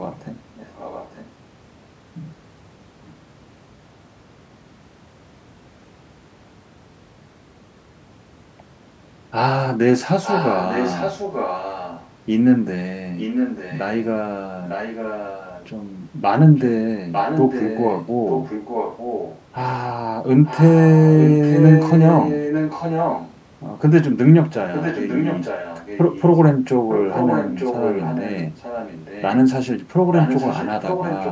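From 0.55 to 1.3 s, then 10.23 to 12.08, 13.18 to 19.4, 20.44 to 23.34 and 24.73 s to the end, a second copy of the speech trails the original by 900 ms. This is an echo leak, likely from a far-end loudspeaker whose echo canceller let its microphone pickup return. It starts well below the direct speech and grows to only slightly quieter near 21 s. Unlike room reverb, it is a distinct, late repeat rather than a smooth decaying tail.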